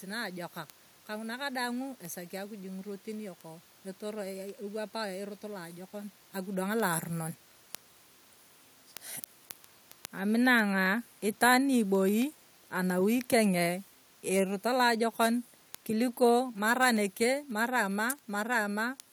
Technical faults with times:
0.16-19.00 word clock ticks
13.34-17.09 automatic gain falling

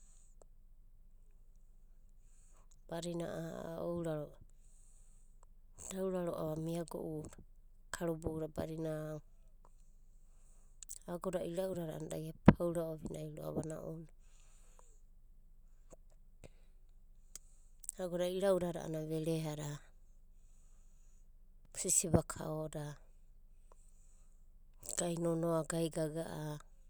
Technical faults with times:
21.65 block of digital silence

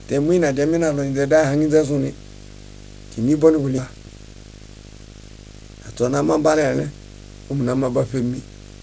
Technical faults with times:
0.00-8.83 video or display buzz
3.78-3.80 skip ahead
3.88-6.88 jitter buffer speed-up

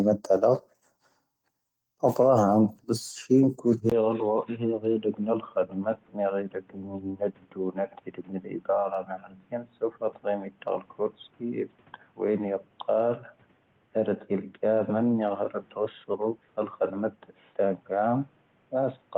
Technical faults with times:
3.90-19.17 input switched to a poorer device

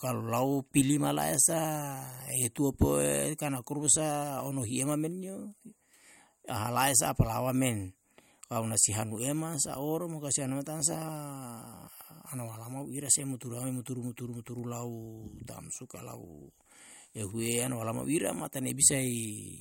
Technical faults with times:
none

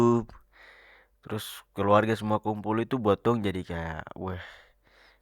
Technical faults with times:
none

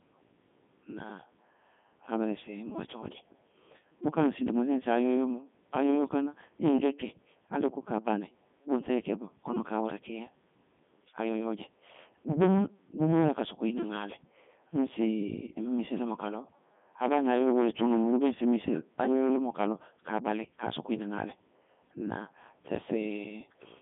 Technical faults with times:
0.00-23.82 Codec 2 vocoder

